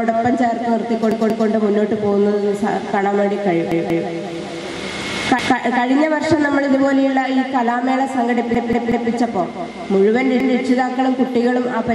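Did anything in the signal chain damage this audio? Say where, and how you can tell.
Yes, repeated buffers at the driver or buffer stage: 186 ms segments replay with hard joins at 1.12, 3.72, 5.39, 8.55 and 10.40 s, which fits an 8192-sample buffer re-sent when new audio arrived late.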